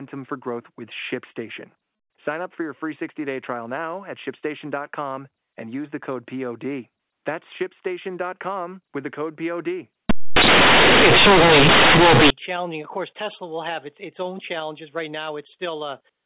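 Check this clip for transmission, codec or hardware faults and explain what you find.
One decoding fault. From 10.10 to 12.30 s, companded audio read as linear: A-law bytes skip expansion and play as plain 8-bit samples, so the speech becomes very loud, buzzy distortion with heavy noise in pauses, beside telephone-band G.711 coding elsewhere.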